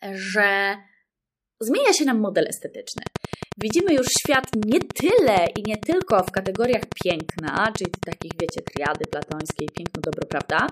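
Speech with a train of clicks from 2.98 to 10.70 s: about a hundred near-identical pops at a steady 10.9 per second, well above the speech and also heard in pauses, likely interference from nearby equipment. Their regular spacing sets them apart from random crackle.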